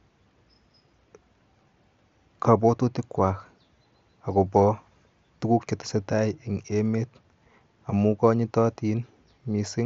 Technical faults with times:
none

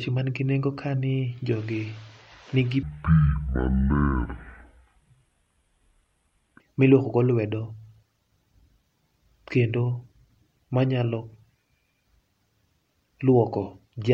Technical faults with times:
2.83-6.60 section at the wrong speed

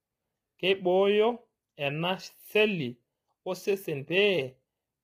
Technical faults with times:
0.00-5.04 low-delay AAC compression

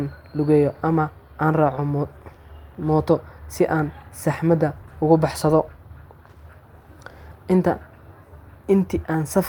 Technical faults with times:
none

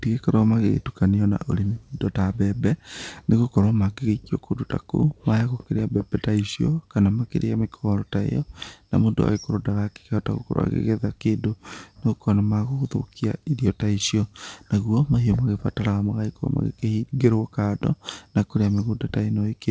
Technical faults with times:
none

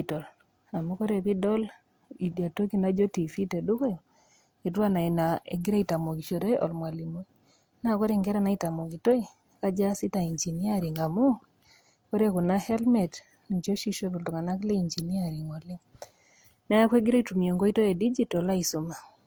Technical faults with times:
0.00-19.26 transcoding between lossy codecs

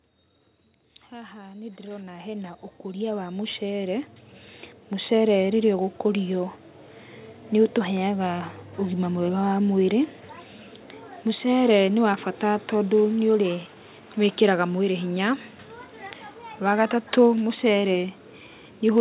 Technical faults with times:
1.10-4.16 automatic gain rising

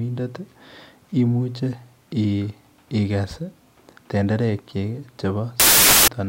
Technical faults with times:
5.60-6.08 samples built from the wrong bytes

